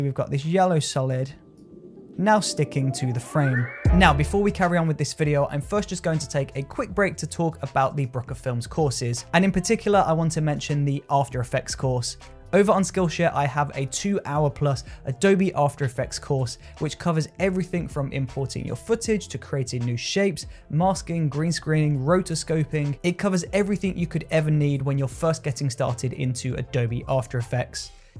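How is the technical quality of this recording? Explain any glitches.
No glitches or technical faults can be heard here.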